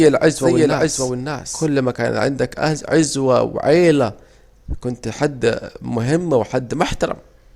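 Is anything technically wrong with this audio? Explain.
Yes. A doubled audio track runs from the start to 1.66 s, ending abruptly just before "ما كان". A second full-band copy trails about half a second behind, roughly 5 dB quieter and with no decay, likely from a second, slower capture path.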